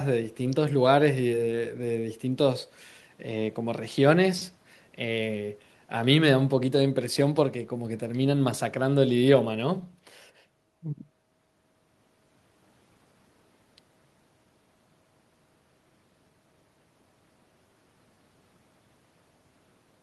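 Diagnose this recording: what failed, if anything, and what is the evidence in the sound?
Nothing failed; no faults heard.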